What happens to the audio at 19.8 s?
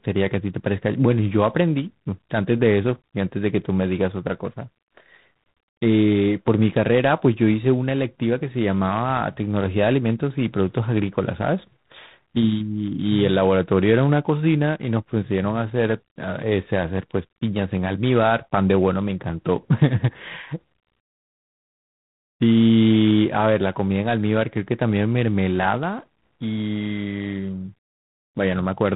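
At 19.8 s the speech carries G.726 ADPCM coding damage, present throughout the clip rather than starting there. The rasping hiss tracks the speech level, which fits coding at 24 kbit/s, where each sample keeps only three bits of difference from an adaptive prediction. On a spectrogram, everything above 4 kHz is empty, and a grainy noise floor rises and falls with each syllable. The waveform looks rough and fuzzy instead of smooth.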